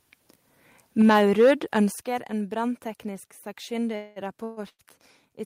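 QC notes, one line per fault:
1.0–1.79 s, microphone overload: peaks run about 5 dB past the converter's limit, clipping roughly 5% of samples; likely input set too hot, giving harsh crackle rather than a level change.
1.02 s and 2.01 s, microphone volume stepped down: level drops abruptly by about 4 dB, then about 9 dB, likely software cutting input gain after the distorted peaks.
3.95–4.19 s and 4.44–4.60 s, call audio freeze: the last sound is extended as a fading buzz or hiss for 206 ms, then 129 ms, likely an emptied jitter buffer; speech resumes where it stopped, nothing lost.
4.69–4.82 s, short stall from a late packet: a sound is stretched 100 ms until the delayed packet arrives, heard as a held syllable with a slight buzz or dip, shorter and subtler than a freeze.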